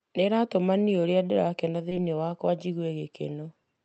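At about 1.89 to 1.93 s, right after "ĩratũma niĩ ũrĩa ndĩrakena", there's a short concealed packet loss. Roughly 20 ms of the call didn't reach the decoder in time, so the receiver covered the gap by carrying the last bit of sound forward, then eased back into the real audio. You hear it as a quick smear or tiny wobble, and a brief sound there can slip away. The call path's Opus coding adds its usual coding noise, with the top end capped around 8 kHz.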